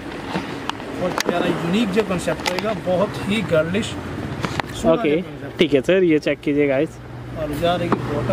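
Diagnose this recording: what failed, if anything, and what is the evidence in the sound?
Nothing failed, and there is no evidence in the sound of any fault in the recording.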